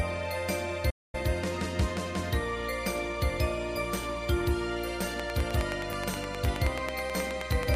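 At 0.90 s the sound cuts out in mid-flow and stays silent until 1.15 s, a gap of about 0.23 s, before carrying on. This is a playback stall, likely the player running short of data or having its output thread held up. It differs from a dropout or a deliberate pause because the break is abrupt and then recovers cleanly.

From 5.20 s to the end, a train of clicks sits over the sound. The pulses are evenly spaced at about 9.4 per second, roughly 15 dB above the surrounding level, and all alike in shape. They are likely interference or a faulty connection. Their steady, identical ticking, which carries on through quieter moments too, sets them apart from random crackle or isolated pops.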